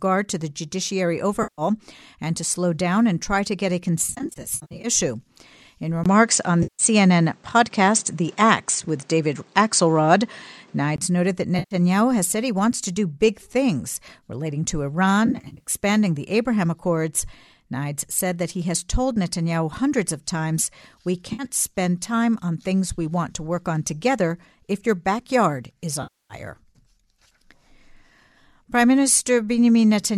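AAC frame loss with concealment first hits at 1.43 s, between "to the judiciary" and "and to slow down", as a 150 ms smeared patch. After "try to get a", scattered dropouts fill 4.04 to 4.88 s. At 6.04 s a 20 ms silence comes, and then the sound turns duller and slightly noisier until 10.98 s, with nothing above 9.1 kHz. This is likely an input switched to a poorer device. Within that stretch, a 160 ms concealed loss blurs 6.63 s. Further smeared or phasey gaps follow at 11.59 s (120 ms), from 15.26 to 15.70 s (scattered), at 21.33 s before "spend time on things" (60 ms), and at 26.03 s (270 ms). In each, the decoder patches the missing audio from the last good spectrum.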